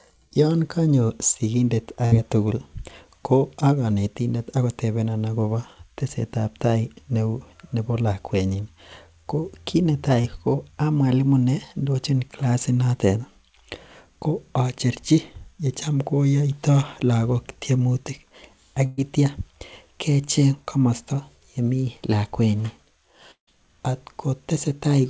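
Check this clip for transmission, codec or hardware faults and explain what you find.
Yes, the clip has five transmission faults of three kinds. They come on top of a call path whose band stops at 8 kHz, which fits a wideband codec such as G.722.

Burst of packet loss, 2.06 to 2.14 s and 18.86 to 18.99 s: several consecutive packets failed to arrive in time, about 60 ms of speech at the first point and 120 ms at the second. The decoder extended the preceding sound and faded it, so the speech turns briefly into a held buzz or fading hiss before it resumes with that stretch skipped. On a spectrogram the harmonics run flat and smeared and then dim. In the waveform the envelope decays smoothly with no gap to zero, because the fill covers almost the whole hole.

Short concealed packet loss, 10.22 to 10.26 s and 20.25 to 20.29 s: about 20 ms failed to reach the decoder each time. The decoder patched it by extrapolating from the last pitch period, or with shaped noise if the sound was unvoiced, and then crossfaded back to the real signal. 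It is heard as a tiny smear or wobble, and a short consonant may disappear. A spectrogram shows a thin column of blurred, repeated texture. The waveform shows a few periods that repeat too regularly.

Long network dropout, 23.31 to 23.49 s: about 160 ms of audio is missing. The first part is filled with a decaying continuation of the last sound, and then about 110 ms of silence remains before the audio returns further on. A long interruption in arriving packets is the likely cause. On a spectrogram a fading smear runs into a blank vertical band. In the waveform the amplitude tapers off and then lies flat and silent before the signal returns.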